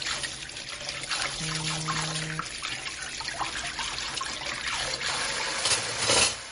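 The likely cause is heavy MP3 compression: starved of bits, the encoder has discarded everything above 10.6 kHz and dropped weak frequency components that then flicker in and out between frames, a level of damage that fits a low bitrate of around 38 kbps. Throughout this recording of sounds, the result is a dull top end, a watery, swirling texture, and smeared attacks, all plainly audible from start to finish.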